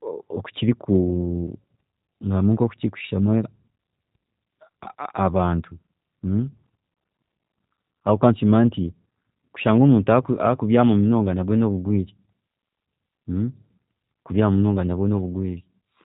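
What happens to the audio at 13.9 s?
At 13.9 s the speech carries G.729 codec damage, which runs through the whole clip. Each 10 ms frame is rebuilt from a vocal tract model, a pitch predictor and a few pulses, pointing to roughly 8 kbit/s. Nothing above 3.8 kHz survives. The speech sounds muffled, rough and plainly synthetic.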